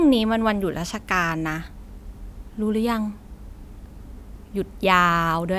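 No technical faults are audible.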